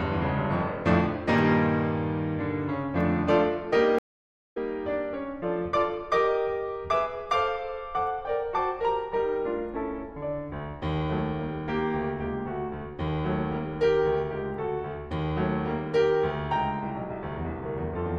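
At 3.99 s the music cuts to silence for about 0.55 s, returning at 4.57 s: a stream reconnect. The connection dropped, the player went quiet, then reconnected and started a fresh decoder mid-stream, so the first frame or two come back muted or faded in. Unlike a plain dropout, which resumes exactly where it left off, the music picks up roughly a third of a second further on, so a short stretch is simply missing.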